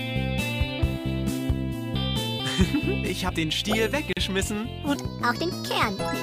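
At 4.13 s the sound stops dead for about 40 ms and resumes at 4.17 s. This is a gap at a join of encoded pieces. Two separately encoded segments were butted together without trimming, so the encoder's start-up delay and last-frame padding survive as silence. Unlike a dropout or lost packet, nothing is missing: the sound carries on exactly where it broke off, and the edges are smeared by the codec.

From 4.95 s to the end, the audio runs 1.43 times too fast, a section at the wrong speed. It was likely played back against the wrong clock. Pitch rises by about seven semitones, and the timing hurries in step with it. That locked change of pitch and tempo, switching in at one instant, distinguishes it from a pitch-shift effect, which would alter pitch while leaving the pace intact.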